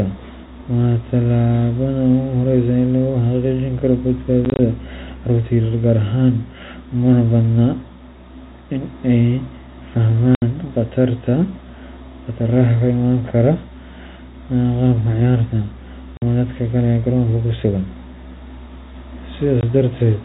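Packet loss filled with silence breaks the speech four times. Between 4.45 and 4.59 s, about 70 ms of gaps are scattered across 140 ms, none longer than 20 ms. A solid 70 ms hole follows at 10.35 s, then 50 ms at 16.17 s and 20 ms at 19.61 s. The gaps come in 10 ms steps, which fits 10 ms packets. Each dropout cuts hard to silence, over the narrow telephone band.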